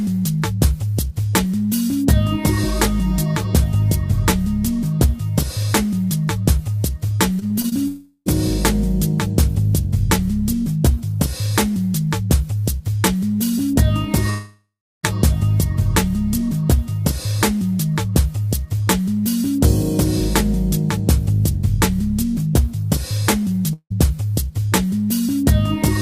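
Repeated packet loss (robotic sound) at 7.39 to 7.73 s: four short gaps, the longest 21 ms, are patched by repeating the preceding sound, giving choppy, robotic audio with pieces missing.

Long network dropouts at 7.87 to 8.28 s, 14.30 to 15.05 s and 23.73 to 23.92 s: the last sound is stretched and fades, leaving about 20 ms, 330 ms and 70 ms of silence respectively. Roughly 380 ms, 740 ms and 180 ms of audio never return, most likely because nothing arrived over the network during those stretches.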